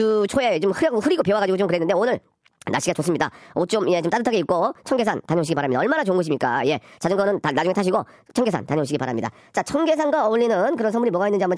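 From start to finish, the speech runs fast and high. This is a wrong sample rate fault. Speed rises by 1.38 times and pitch by about 5.5 semitones, which fits audio recorded at 16 kHz but played at 22 kHz without conversion.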